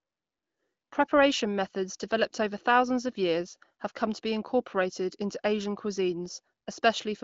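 No technical faults are audible.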